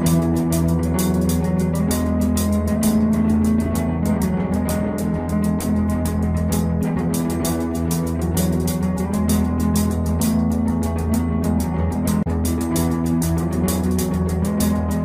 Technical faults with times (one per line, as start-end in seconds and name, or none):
none